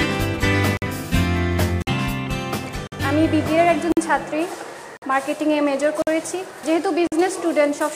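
The audio was delivered in 1-second chunks with a gap between chunks of 50 ms of silence inserted at each join. This cuts short holes into the sound at 0.77, 1.82, 2.87, 3.92, 4.97, 6.02 and 7.07 s, a regular stutter with nothing missing.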